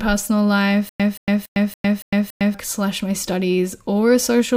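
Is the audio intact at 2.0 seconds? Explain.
No. From 0.89 to 2.54 s the speech has a stutter with silent gaps: a 176 ms fragment repeats six times, each followed by about 106 ms of digital silence, likely from a stalled stream replaying its last buffer. The waveform shows identical blocks every 282 ms separated by flat lines.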